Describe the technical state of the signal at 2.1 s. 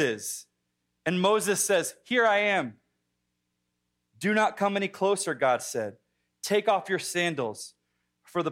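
At 2.1 s the speech signal is intact, with no audible dropout, clipping, distortion or other fault at that point.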